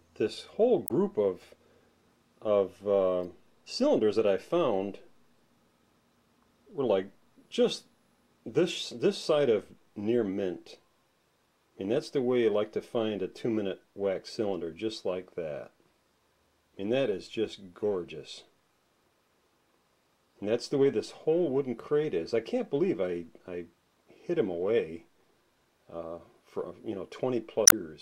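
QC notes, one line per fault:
0.85–0.91 s, 3.22–3.25 s and 27.65–27.73 s: damaged data in a compressed stream. Corrupt bytes make the decoder misread frames and lose sync, giving brief glitches.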